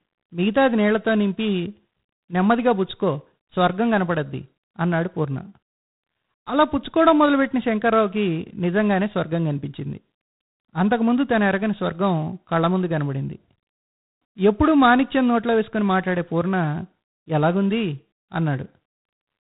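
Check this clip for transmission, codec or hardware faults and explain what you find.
One codec fault runs through the whole speech clip. G.726 ADPCM coding throughout: coarse adaptive-difference quantisation, which fits 24 kbit/s, adds a harsh, level-following rasping hiss. Nothing passes above 3.8 kHz.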